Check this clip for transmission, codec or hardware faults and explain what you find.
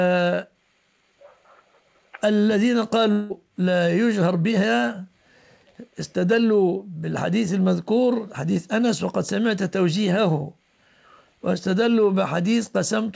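One transmission fault is audible. The audio is band-limited at 8 kHz throughout, which fits a wideband call codec such as G.722.

From 3.12 to 3.32 s, the sound turns into a buzzy continuation of what came just before, fading but never reaching silence. Then it resumes with about 180 ms missing. This is likely a long network dropout: packets stopped arriving, and the receiver's concealment extended the last sound to cover the gap.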